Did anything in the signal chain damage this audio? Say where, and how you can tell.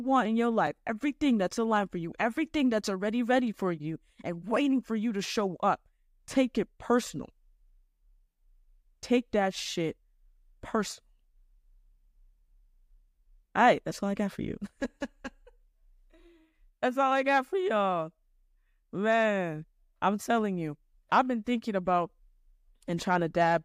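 Yes, there's a block of digital silence at 0.67 s, and it points to the driver or buffer stage. For about 3.3 ms the signal drops straight to silence and then comes back, with no fade either way. A hole that short doesn't register as a gap in the speech. You hear a tick or dip instead. That pattern fits the output buffer not being filled in time for one cycle.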